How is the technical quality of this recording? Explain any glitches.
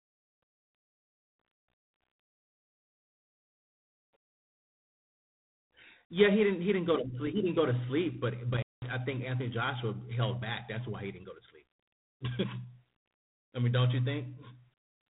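Technical quality is degraded by codec damage throughout and one dropout. G.726 ADPCM: the speech carries a harsh, rasping hiss that rises and falls with its level, and nothing passes above 3.9 kHz. The coarse quantisation of prediction differences points to the 24 kbit/s mode. Intermittent contact: between 8.53 and 8.91 s, a loose connection opens for about 197 ms, cutting the sound out with crackle at both edges and faint hiss in the gap.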